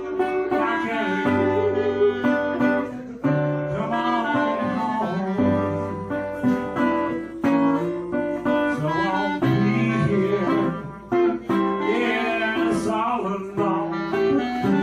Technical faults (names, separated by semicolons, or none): none